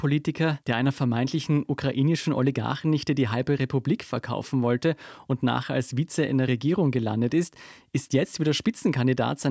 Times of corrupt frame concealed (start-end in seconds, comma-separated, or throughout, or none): none